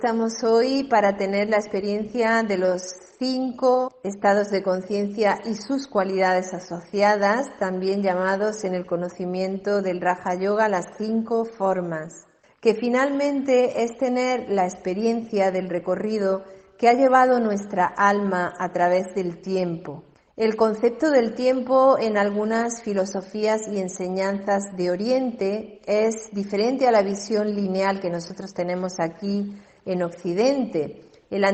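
Nothing stood out as a technical fault on listening.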